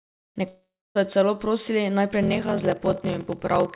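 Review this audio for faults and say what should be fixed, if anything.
From 0.48 to 0.97 s, the stream most likely suffered a long network dropout: packets stopped arriving for about half a second and that audio never played. The receiver stretched the last sound into a fading buzz or hiss, then left a silent stretch of about 0.28 s before the audio resumed at "jo celo prosili naj", with the missing portion gone. To prevent this, use a more robust transport path or add redundancy and packet-loss recovery on that link.

From 2.21 s to the end at about 3.8 s, there is a block size mismatch (padded). An upstream stage writes shorter blocks than the next stage reads, and the reader fills the rest of each 1024-sample block with zeros. That inserts a tiny gap in every block, heard as a 43.1 Hz buzz, which fits 1024-sample blocks at 44.1 kHz. The audio after "jo celo prosili naj" also runs slow, at 0.861 times normal speed, while its timbre stays. 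The G.711 mu-law call path's cutoff at 4 kHz can be heard throughout. To prevent this, make the writer and reader agree on block size, or buffer between them instead of padding.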